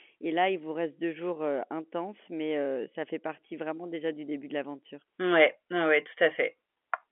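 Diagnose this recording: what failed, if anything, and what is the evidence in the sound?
Nothing here has failed; the speech comes through a G.711 telephone path that tops out around 3.7 kHz, exactly as a phone line should.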